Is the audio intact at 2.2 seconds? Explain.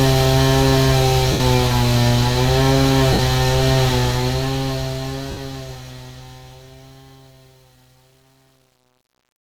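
Yes, the audio is intact at 2.2 seconds, with no fault at that moment.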